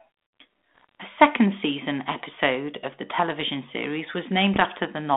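Bit errors on an ADPCM link strike from 0.76 to 0.95 s and again from 4.54 to 4.65 s, heard as pops and rough, gritty bursts with brief jumps in level. Each flipped bit throws off the decoder's step size and predictor, so the damage rings on for some milliseconds beyond the error itself. The density suggests a few bits in every thousand, on a narrow 250 Hz to 3.6 kHz G.726 line, which fits 32 kbit/s.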